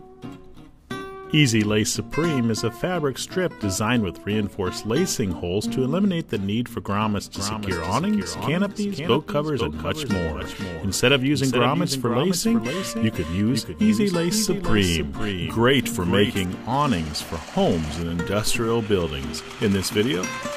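From 7.35 to 16.45 s there is a doubled audio track: an undecayed copy about 5 dB down trails roughly half a second behind, unlike echo. It is likely a slower second capture.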